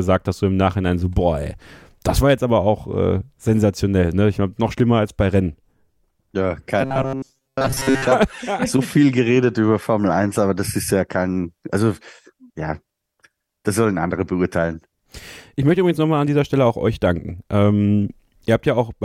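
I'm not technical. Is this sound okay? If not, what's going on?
No. From 6.81 to 8.08 seconds, the speech turns into a flat, metallic buzz. This is robotic sound from repeated short buffers. The likely cause is audio arriving too slowly, so the software keeps replaying the last tiny slice, about 7.5 ms long. Those repeats force a steady hum at 134 Hz onto the sound. For most of that stretch, the real audio is skipped. It sounds mechanical.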